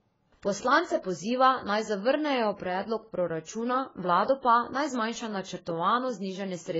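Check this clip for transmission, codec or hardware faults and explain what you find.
One fault runs through the whole recording: AAC compression damage, heavy throughout. The speech has nothing above about 7.6 kHz, which points to a very low bitrate, around 16 kbps, with the encoder likely AAC-LC. Starved of bits, the encoder lowered its cut-off and quantised the remaining frequency lines coarsely, leaving gaps in the spectrum. The result sounds dull and smeared, with a warbling, fizzy texture on sustained sounds and sibilants.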